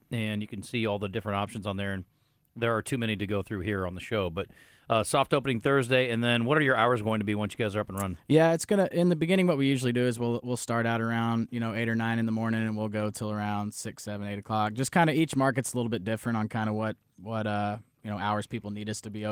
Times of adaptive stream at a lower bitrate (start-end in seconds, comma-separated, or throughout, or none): none